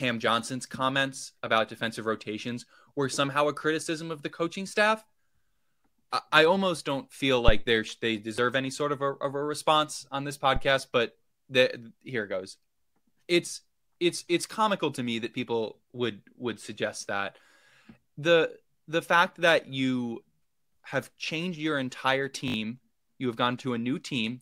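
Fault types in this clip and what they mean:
Phantom power thump: a supply was switched on a live input, and the sudden voltage step passed through the coupling capacitors. In this speech it lands as two deep thumps, at 7.48 s and 10.56 s, each decaying within about 40 ms.
Repeated buffer: fresh audio arrived late, so the device replayed its last 20 ms buffer, leaving hard joins. At 8.36 s one extra play gives a brief click-like stutter; at 22.48 s three extra plays form a short buzz, with roughly 70 ms of audio lost.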